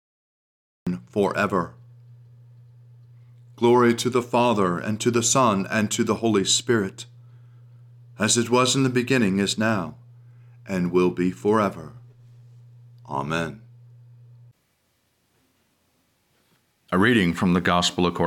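Cut-off start at 0.87 s: the capture began late, so digital silence gives way abruptly to speech already mid-sound, with no natural attack or fade-in.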